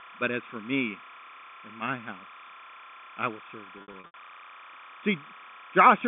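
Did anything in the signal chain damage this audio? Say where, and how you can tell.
Yes, two things got in. The first is timecode bleed in the analogue wiring. A chirping warble runs behind the speech for the whole clip, flipping between two pitches an octave apart, around 1 kHz and 2 kHz, and sitting roughly 20 dB under the speech. That's linear timecode at 30 frames per second leaking in from a neighbouring track or cable. Its square wave switches between those two frequencies as the code bits change.

The second is packet loss with pitch repetition on the network side, between 3.78 and 4.14 s. Over about 360 ms, 220 ms of audio went missing in scattered bits, with the longest single gap about 80 ms. The receiver covered each hole by repeating the last pitch period and fading it out, so that stretch sounds held and buzzy instead of flowing. The G.711 telephone coding is behaving normally, and you can hear its band of roughly 150 Hz to 3.5 kHz.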